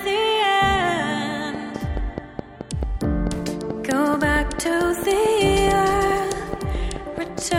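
A train of clicks runs from 1.55 s to 7.39 s, about thirty sharp pulses at a regular 4.6 per second, each standing roughly 10 dB above the surrounding sound. The clicks share much the same shape and keep ticking steadily through quieter stretches as well as louder ones. Such an even, repeating pulse most likely comes from electrical interference from nearby equipment or a faulty connection or power supply.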